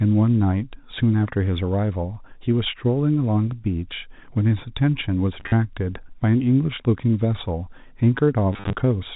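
Speech carried over G.711 A-law telephone coding, which passes nothing above 4 kHz, has been hit by packet loss with last packet repeated at 5.4 to 5.52 s and 8.53 to 8.75 s. Packets dropped out in scattered runs of up to 40 ms, which fits 10 ms packets, and the receiver replayed the last good one to fill each gap. Those repeats ignore the pitch cycle, so longer runs buzz at about 100 Hz, giving two brief robotic stutters.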